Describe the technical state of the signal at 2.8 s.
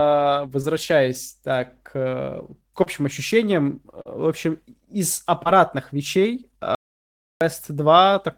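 At 2.83 to 2.87 s a short concealed packet loss occurs: about 20 ms of the speech never arrived in time, so the receiver extrapolated the preceding sound for roughly 22 ms and cross-faded back, leaving a brief smear or wobble.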